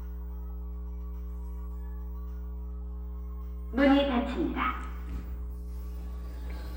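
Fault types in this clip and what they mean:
Mains hum: A steady low tone at 60 Hz runs under the sound for the whole clip. It comes from the power line leaking into the signal, through a ground loop or a nearby transformer. Here the hum is strong, only about 5 dB below the wanted sound, so it sits close to the same level. It never stops or changes. Its fixed pitch makes it a constant drone beneath everything else.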